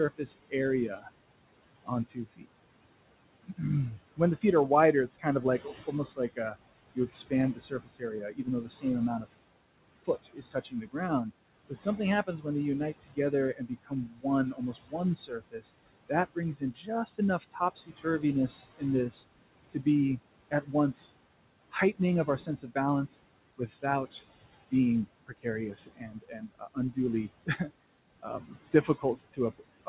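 Throughout, the background noise drops away between phrases and swells back under the speech. These are noise suppressor artifacts: the suppressor pulls down bands it judges to be steady noise frame by frame, here by about 21 dB, beneath room noise sitting about 16 dB below the speech.

From 0.18 to 2.48 s, parts of the speech sound swallowed, about half a second in total, with dips of up to about 20 dB. From 3.43 s to the end, soft sounds keep fading, by up to about 21 dB. This is speech cut by the noise suppressor, which mistook quiet speech for noise and turned it down.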